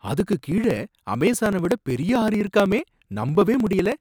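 From 0.08 s to 3.92 s the speech carries periodic USB or driver dropouts: every 0.063 s roughly a millisecond of audio is skipped, giving a steady ticking. On a waveform each is a small discontinuity; a spectrogram shows evenly spaced thin vertical broadband lines.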